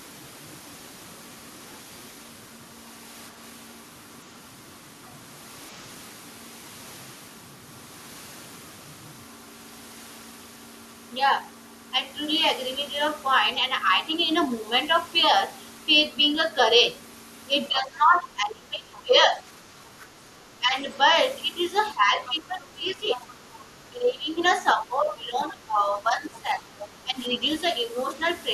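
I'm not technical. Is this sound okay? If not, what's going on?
No. In the second half of the clip, two related problems show up whenever both people seem to talk at once.

The first is speech suppressed in double talk. The speaker's voice suddenly gets quieter or drops out in pieces. This happens from 17.69 to 19.45 seconds, briefly at 20.59 to 20.75, from 21.95 to 23.24, and from 23.89 to 27.41. The first of these is the deepest dip. The likely cause is the echo-removal feature on the call. It couldn't tell the speaker apart from the other person, so it turned everything down.

The second is the other side's voice leaking through. A faint second voice can be heard under the speaker. It appears as a short scrap at 22.26 to 22.34, then at 23.11 to 23.54, and at 26.33 to 26.87. It is much quieter than the main voice. This is likely sound from the speaker's loudspeaker getting back into their microphone, which the echo removal didn't fully clear.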